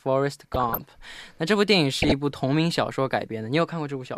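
From 0.40 to 0.81 s, then from 2.00 to 2.12 s, the speech carries DAB burbling: a small fraction of bit errors, around half a percent, escapes error correction and corrupts MP2 samples and scale factors, so individual sub-bands jump in level frame by frame, producing short blips of noise.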